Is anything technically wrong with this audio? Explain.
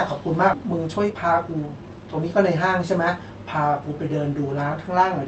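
Yes, two faults stand out in this speech, which passes through a WebRTC call path whose energy on a spectrogram tops out near 8 kHz. At 0.53 to 0.55 s there is a skip ahead: with later audio already queued, roughly 0.7 s was dropped and the two sides were joined with no gap. It sounds like an abrupt lurch forward, and the waveform shows a sudden splice with no silence between. From 0.63 to 2.44 s comes a jitter buffer speed-up. The buffer held surplus delay, so it repeatedly trimmed pitch-period-sized pieces, removing about a fifth of a second. Speech runs about 12% fast at unchanged pitch and sounds hurried. A spectrogram shows syllables compressed in time with harmonic spacing unchanged.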